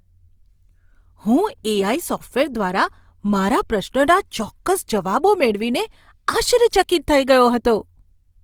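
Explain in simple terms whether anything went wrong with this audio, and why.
Something did go wrong, and it lasts the whole clip, from the first second to the last. The speech has a rough, grainy texture, with a plainly audible noisy fizz around sounds that should be clean. The likely cause is Opus compression, squeezed hard to save space. In its music mode, Opus keeps each frequency band's overall loudness but fills in missing detail with noise or copied patterns. That swaps smooth tone for grit. The highs still reach the top, so nothing sounds muffled.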